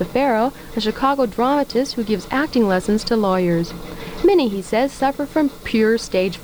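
From start to finish, the audio carries low bit depth with dither. The hiss level fits a depth of about 7 bits. With so few levels, each sample is rounded coarsely. Dither was added before that rounding. It turns the rounding error into steady white noise instead of distortion. The result is a constant, even hiss. It sits roughly 30 dB below the signal. It does not follow the sound's level.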